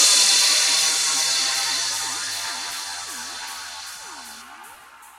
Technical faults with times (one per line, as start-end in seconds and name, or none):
none